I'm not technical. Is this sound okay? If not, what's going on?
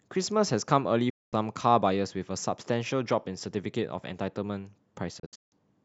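No. The speech has two digital broadcast dropouts. The receiver lost good data and muted. From 1.10 to 1.34 s the sound fades out within 8 ms and returns. From 5.19 to 5.53 s it breaks into short holes, the longest 160 ms. Whatever was said there is gone.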